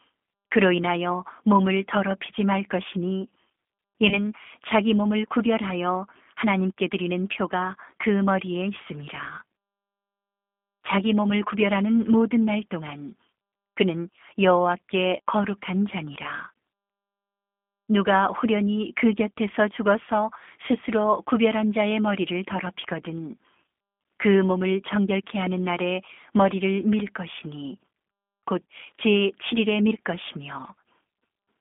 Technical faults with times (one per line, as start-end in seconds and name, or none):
0.00-31.61 G.729 codec
4.09-4.19 VoIP packet loss concealed by the speech codec